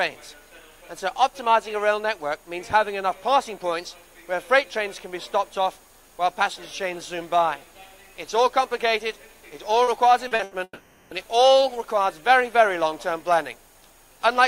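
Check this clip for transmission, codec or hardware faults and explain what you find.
Network packet-loss faults cluster in a short stretch of the clip, worsening from brief concealed gaps to a burst and then a long dropout.

Short concealed packet loss occurs at 9.83 to 9.90 s, 10.27 to 10.34 s and 10.35 to 10.42 s. In each, about 40 ms of audio failed to reach the decoder in time. The receiver covered the hole by extending the preceding sound, either from its pitch or as shaped noise, and then blended back into the real signal. Each event is heard as a brief smear or wobble.

A burst of packet loss follows at 10.43 to 10.54 s, with about 80 ms missing. That is too much for a single concealment frame to hide. The decoder kept synthesising the last sound while turning it down across the gap, so it comes through as a held buzz or a fading hiss. The audio then picks up further along, and the material in between is simply absent.

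A long network dropout runs from 10.63 to 11.14 s. Roughly half a second of audio is missing. The concealer extends and fades the last sound for about 480 ms, so a buzz or hiss tails away, with the last 40 ms of that fill near silence before the signal returns. The missing section never reappears. The length and the fade-to-silence shape point to a likely interruption of the incoming stream rather than scattered packet loss.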